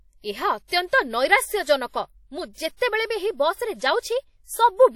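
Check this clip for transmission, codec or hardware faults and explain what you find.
One codec fault runs through the whole speech clip: WMA compression, likely at a low bitrate in the region of 48 kbps. Long transform blocks spread quantisation noise across tens of milliseconds and zero out weak spectral lines, leaving plainly audible ringing, a washy texture, and hiss that breathes with the speech.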